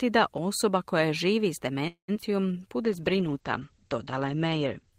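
At 1.87 s the speech stops and the last sound is carried on as a fading buzz, which then sinks into about 110 ms of silence before the audio resumes at 2.10 s. The inserted stretch is 208 ms long, yet nothing of the original appears to be lost; it simply continues from where it halted. This is a call audio freeze, likely caused by packets stalling in transit until the jitter buffer emptied. The playout delay has grown by about 208 ms as a result.

Shortly afterwards come two short concealed packet losses, at 2.14 to 2.17 s and 2.21 to 2.24 s. About 20 ms and 60 ms of audio respectively never arrived, and only 5 ms and 16 ms of synthesized continuation stand in for them, so each is heard as a brief smear with a small piece of sound skipped. Dropping more than was filled also trims back some of the delay built up by the freeze.

From 2.31 to 2.61 s a jitter buffer slow-down stretches the audio. 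The receiver repeats individual pitch periods and bits of pause to rebuild its reserve, adding 58 ms. Playback runs at 83% speed while the pitch stays the same, so sounds in this span are audibly drawn out.

From 2.83 s to the end of the clip a call bitrate drop is heard. The encoder rate falls from 32 kbps to 11 kbps and stays at its lowest for about 1.85 s. Opus responds with coarser coding and narrows the audio bandwidth from 20 kHz to 8 kHz. The result is speech that sounds duller and more muffled, with a rough, watery texture to the remaining detail.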